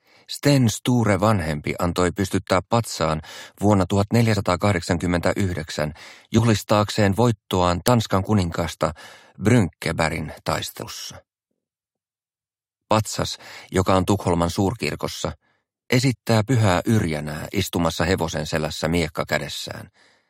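At 4.35 s the playback shows compressed frames skipped: about two whole frames never reach the output, so the audio jumps ahead by about 50 ms. The frame length of 23.2 ms fits a codec working in 1024-sample frames at 44.1 kHz. The same fault returns at 6.37 to 6.39 s with about one frame, roughly 20 ms, lost.

At 7.88 s an uninitialised buffer is played: a block lasting 1.45 ms, which fits a 64-sample block, goes out before any audio has been written to it, so stale memory contents are heard as samples. The result is a very brief, loud crack.

At 10.81 s frames are skipped again, the largest dropout in the clip. About four frames go missing, roughly 100 ms of audio.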